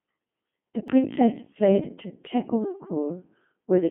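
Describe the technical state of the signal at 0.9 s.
Right around there, the audio has been through the Codec 2 vocoder for the whole clip, and it sounds like the 2.4 kbit/s mode. The decoder isn't keeping the original waveform. It only gets pitch, voicing, energy and a rough spectral envelope, then rebuilds the speech from sine waves. That's why it sounds robotic and buzzy, with heavy damage. It's squeezed into roughly a 150 Hz to 3.4 kHz line band, with nothing above 3.6 kHz.

Just before your mark, at 0.88 s, there's a block of digital silence. For about 0.73 ms the sound cuts out and comes back with no fade, which fits a 32-sample block not being filled in time. The gap is too short to hear as a hole, so the hard edges come across as a single tick.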